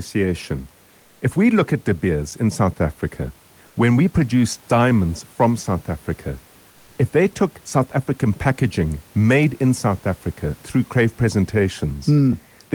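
Comfort noise in place of the background appears twice, likely because the sender's discontinuous transmission (Opus DTX) stopped sending audio during pauses, leaving the receiver to fill them with synthetic noise. From 0.99 to 1.21 s, just before "if we look at", the room noise gives way for 220 ms to a flat, featureless hiss about 3 dB quieter. The same swap recurs from 3.67 to 3.75 s, for 80 ms, about 2 dB down, right before "when we produce diamonds".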